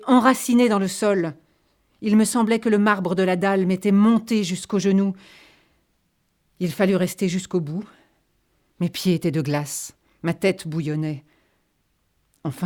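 A speech recording with no technical faults to be heard. Nothing in it calls for a time or a cause.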